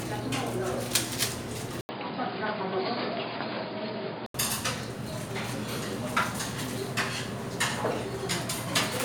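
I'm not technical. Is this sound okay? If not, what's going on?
No. From 1.81 to 4.34 s there's an input switched to a poorer device, likely a jump to a lesser microphone. After a brief 80 ms gap, the sound turns dull, losing everything above 4.9 kHz, and gains a faint new background noise, while the overall loudness stays about the same.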